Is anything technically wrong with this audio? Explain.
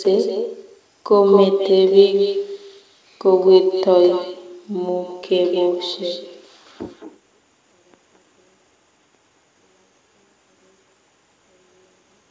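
Yes. Throughout the speech there is an echo with no canceller: the far end's loudspeaker leaks into its microphone, so the speech returns about a fifth of a second later, roughly 9 dB quieter, as a thin copy. On a spectrogram each syllable has a fainter duplicate trailing just behind it.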